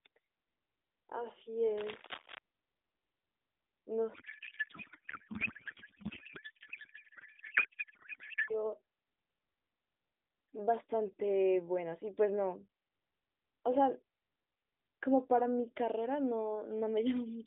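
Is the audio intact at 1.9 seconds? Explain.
No, not quite. At 1.9 seconds the speech sits inside a burst of cable scratch noise running from about 1.77 to 2.39 s. It sounds like a brief scratchy rustle laid over the speech, roughly 10 dB below it. That's most likely a worn cable or connector being nudged: its contact resistance jumps around quickly, and those rapid changes come through as dense, ragged noise on top of the narrowband, phone-line sound.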